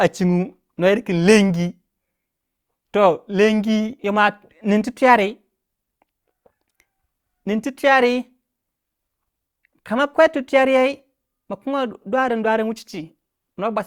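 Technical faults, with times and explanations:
No technical faults detected.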